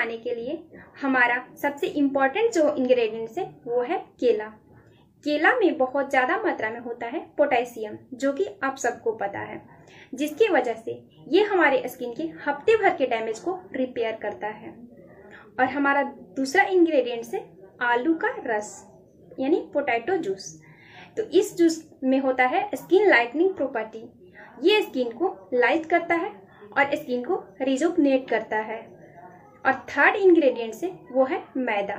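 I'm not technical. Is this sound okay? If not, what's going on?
Yes, the sound is in good technical shape, with nothing audibly going wrong with the signal at any point.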